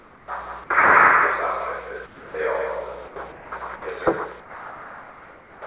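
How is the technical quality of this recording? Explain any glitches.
The main glitch is comfort noise in place of the background, heard over a call path that cuts everything above 4 kHz. At 0.00–0.28, 2.06–2.34, 3.08–3.16, 3.32–3.52 and 4.40–5.62 s, the real background gives way to flat, featureless hiss, about 2 to 5 dB quieter. The likely cause is discontinuous transmission, where the receiver synthesises that noise during the gaps.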